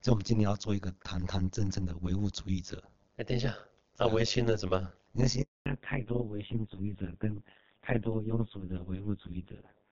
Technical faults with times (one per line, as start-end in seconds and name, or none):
0.00-9.92 overlap-add ripple
5.42-5.66 handover gap
5.66-9.92 fallback to narrowband